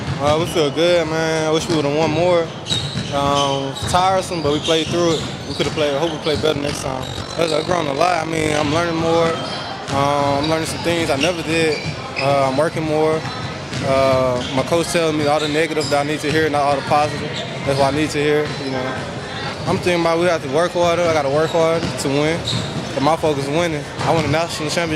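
From 6.44 to 8.63 s the audio carries overlap-add ripple: it was split into windowed frames and rejoined with an overlap whose windows fail to sum to a steady gain, so the level dips and recovers once per frame, around 50 times a second, by about 11 dB. It sounds like a rough, buzzy tremolo. A waveform shows a regular comb-like scalloping of the envelope, and a spectrogram shows evenly spaced vertical striping across all frequencies for that stretch.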